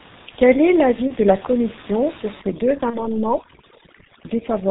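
G.723.1 codec coding runs throughout. Its 30 ms frames and heavy compression, consistent with about 6.3 kbit/s, cut everything above 4 kHz, leaving the speech muffled and hoarse with smeared consonants.

VoIP packet loss concealed by the speech codec appears from 1.08 to 1.13 s and again from 2.90 to 3.16 s. Each gap fits one lost 30 ms frame. The decoder fills it by extending its last pitch and filter, producing a buzzy tone or coloured noise that fades. At the second gap, the distortion lingers for roughly a quarter-second.

Overdone noise removal starts at 2.42 s and lasts to the end. It clamps bands near the noise estimate, so the room noise, about 17 dB below the speech, drops and breaks up into twinkling, warbling specks.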